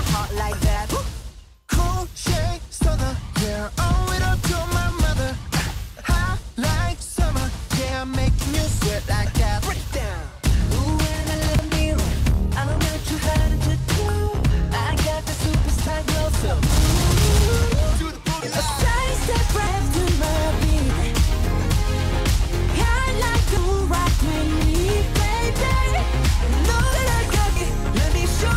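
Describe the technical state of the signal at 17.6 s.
At 17.6 s the signal is intact, with no dropout, distortion, glitch or other audible fault at that point.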